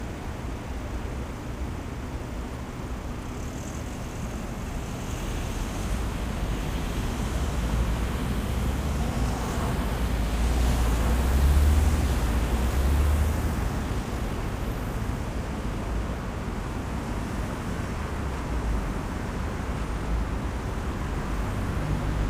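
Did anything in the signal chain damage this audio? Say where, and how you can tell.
Yes. A doubled audio track runs through the whole clip. Every event comes back about one and a half seconds later as a second copy, a few dB quieter than the first. The copy is full-band and dry, with no decay or room colour, so it is not an echo or reverb. The likely cause is a second, slower capture path mixed back in, or an edit that left two copies of the same audio out of step.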